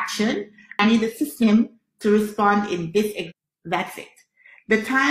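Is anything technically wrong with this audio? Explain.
Yes. Damaged data in a compressed stream shows up twice, at 0.79 to 0.85 s and 3.25 to 3.32 s. Corrupted bytes make the decoder misread frames and hunt for sync, producing a brief chirp, squawk, click or short hole.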